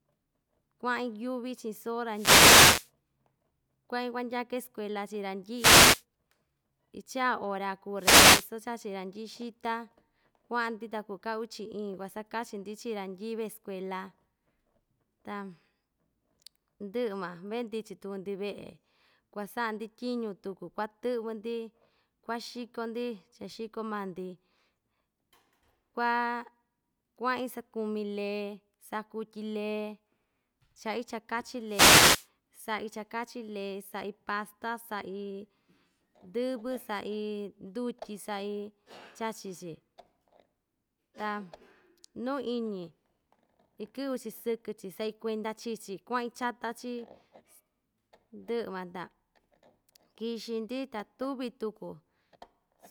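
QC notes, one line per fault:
2.11–2.91 s, wireless microphone noise hit: a burst of static about 0.8 s long as the FM radio link fades and receiver noise swamps the speech.
5.54–6.04 s, wireless microphone noise hit: half-second swish of hiss; reflected radio paths cancel, carrier drops, and the receiver's noise rises over the voice.
7.97–8.49 s, wireless microphone noise hit: another brief static burst, about 0.5 s, from the same multipath fade weakening the analogue FM signal at the receiver.
31.66–32.28 s, wireless microphone noise hit: roughly 0.6 s of hiss and crackle covering the speech as the radio signal fades and receiver noise breaks through.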